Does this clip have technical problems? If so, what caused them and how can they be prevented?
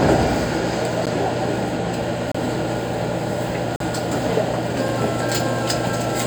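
Yes. There are four blocks of digital silence. The sound drops to silence and returns with no fade. The shortest are single ticks, at 1.06 s (about 12 ms, which fits a 512-sample buffer) and 4.88 s (about 5 ms). Longer holes run from 2.32 to 2.35 s (29 ms) and 3.76 to 3.80 s (42 ms). The output buffer was likely not filled in time, so zeros went out instead. Larger buffers and a lighter processing load prevent this.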